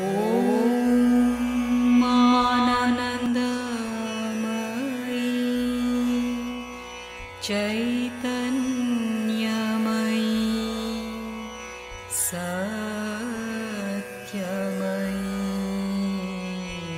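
A second copy of the audio is likely being mixed in through a slower capture path or an out-of-step edit, producing a doubled audio track from the very start until 3.26 s. The copy trails the original by roughly a third of a second and sits at about the same level, so every event is heard twice in quick succession, clean and full-band, with no decay or room colour. At 3.26 s the trailing copy cuts off abruptly.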